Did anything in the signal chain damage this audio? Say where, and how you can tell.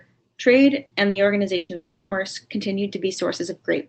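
Yes. At the network stage there are bursts of packet loss at 0.85–0.94, 1.09–1.18 and 1.57–1.72 s. Concealment stretches the last speech sound into a decaying buzz or hiss, then jumps ahead.

From 1.75 to 2.14 s there is a long network dropout, likely a stalled link. About 0.36 s of fading concealment buzz or hiss replaces the speech that never arrived.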